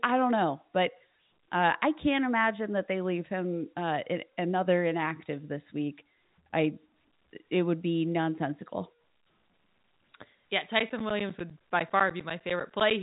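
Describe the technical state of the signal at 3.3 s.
At 3.3 s the speech is intact, with no dropout, click or distortion, only the narrow telephone band of G.711 coding, in which nothing above about 3.8 kHz comes through.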